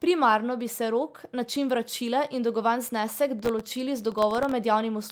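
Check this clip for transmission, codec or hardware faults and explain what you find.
Two faults are audible in this speech clip: one concealed packet loss and one burst of processor overload crackle.

Lost packet rebuilt from error correction, 0.41 to 0.43 s, just before "bi se": there is no gap, but a 20 ms stretch turns briefly rougher and noisier. That fits a single lost packet replaced by the low-bitrate copy carried in the following packet.

Processor overload crackle, 3.39 to 4.52 s, right after "vračila in dolgovan znesek": a gritty crackle rides on the speech for just over a second. Several dozen very short buffers, each under a millisecond, missed their deadlines, and each left a hard-edged silent gap.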